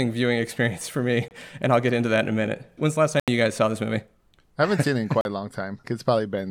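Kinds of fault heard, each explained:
Bluetooth dropout: at 1.28, 3.20 and 5.21 s the speech cuts out for 27, 80 and 40 ms, then resumes as if it had played on, likely from lost wireless packets.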